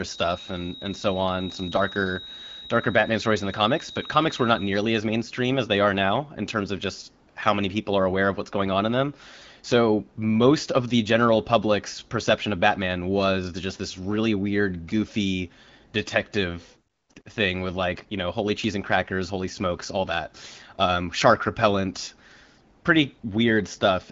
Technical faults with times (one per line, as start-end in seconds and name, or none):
0.00-4.88 feedback whistle
7.29-7.35 AMR comfort noise
16.93-17.25 AMR comfort noise
22.79-22.83 AMR comfort noise
23.19-23.23 AMR comfort noise